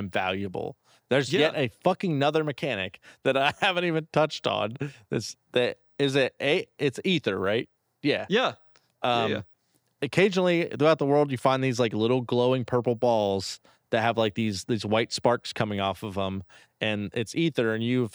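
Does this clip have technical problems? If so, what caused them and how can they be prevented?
No, no technical problems here.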